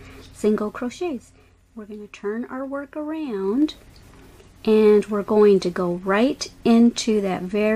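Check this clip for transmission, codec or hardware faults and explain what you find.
One fault stands out: zipper noise between 3.34 and 3.72 s. During that stretch a rapid ticking rides on top of the sound, a grainy zipping texture that lasts only while the level is moving. The gain shifts by about 10 dB, but rather than gliding smoothly it moves in 1 dB jumps at around 20 steps a second. Each abrupt jump puts a small discontinuity into the waveform, and that run of tiny clicks is what produces the zipper sound.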